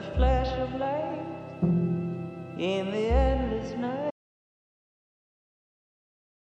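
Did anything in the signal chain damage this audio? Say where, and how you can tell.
Yes. An audio dropout to silence starts at 4.11 s and runs to the end. The sound cuts off mid-flow into silence, with no room tone. The waveform flatlines and the spectrogram goes blank. The likely cause is a lost input link while the recorder kept writing silence.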